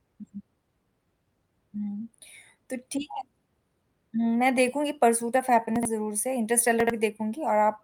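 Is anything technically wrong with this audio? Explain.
Yes. Chunks out of order twice in this speech, from 5.76 to 5.85 s and from 6.80 to 6.90 s. In each, one block of audio about 23 ms long was delivered three blocks late and played after the ones meant to follow it. Nothing goes missing, but roughly 93 ms is shuffled and joined at three hard edges, giving a brief jumbled stutter.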